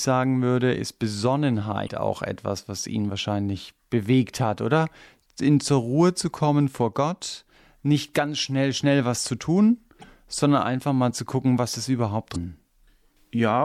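Speech with three short blips, each lasting about 44 ms: at 1.84–1.89 s, just before "auch etwas was ihn"; at 9.99–10.04 s, between "schnell was zu tun" and "sondern einfach mal zu"; and at 12.32–12.36 s, right after "zu gucken was ist". These are damaged data in the compressed stream. Corrupted bytes make the decoder misread a frame and lose sync, producing a brief glitch until it locks onto the next valid frame header.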